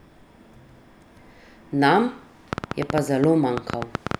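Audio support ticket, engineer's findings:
Train of clicks, 2.53 to 4.16 s. About 15 irregular ticks, roughly 9 per second, well above the speech. Likely nearby equipment interference or a faulty connection injecting pulses.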